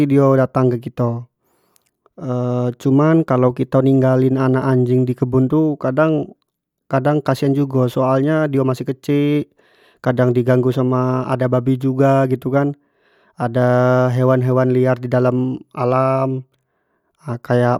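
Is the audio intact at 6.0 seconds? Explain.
Yes, the speech at 6.0 seconds plays through intact, with no dropout, click, distortion or other fault at that moment.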